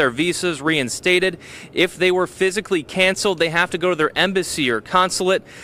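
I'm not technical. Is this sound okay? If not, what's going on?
Yes, no faults here.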